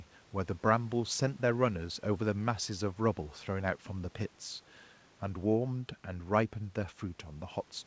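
Nothing stood out on listening to this speech, with the room's background noise sitting about 34 dB below it and the call path's band limit at 8 kHz heard as normal.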